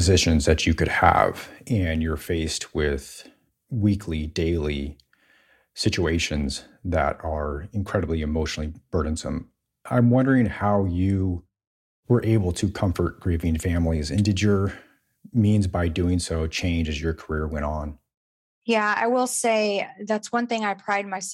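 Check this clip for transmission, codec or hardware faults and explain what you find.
One fault is audible in this speech clip. One channel drops out at 1.68 s and stays lost to the end: the speech falls abruptly by about 6 dB, likely because one stereo side vanished before the mono sum.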